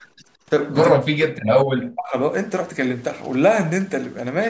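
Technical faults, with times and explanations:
0.94 to 2.14 s, speech suppressed in double talk. The speech dips sharply and breaks into pieces for about a second in total. At its deepest it falls by roughly 40 dB, close to silence. This is likely the echo canceller reacting to both sides talking at once. It cannot tell the near talker from the loudspeaker echo, so it turns everything down. The result is the choppy gaps heard here.
3.10 to 4.29 s, GSM signalling bursts. A galloping pattern of short buzzes sits under the audio, about 25 dB below the speech. The buzz repeats at 217 Hz, the frame rate of a 2G phone's transmissions. A nearby handset is sending short signalling bursts, as it does before a call or text arrives. The audio circuit rectifies the radio energy into this audible rattle. It lies on top of audio already band-limited to 8 kHz by normal call processing.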